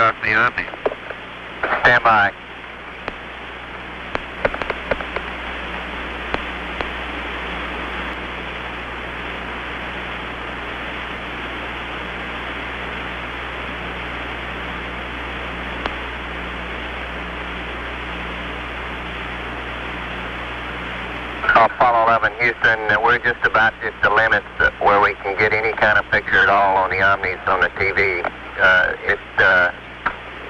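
A doubled audio track runs from 4.37 s to 8.13 s. A second copy of the full-band sound trails the original by about half a second, at roughly the same loudness, so every event is heard twice in quick succession. The copy carries no decay or room colour, and it cuts in and out abruptly at those boundaries. The likely cause is the audio being picked up a second time through a slower path, or an edit leaving two copies misaligned.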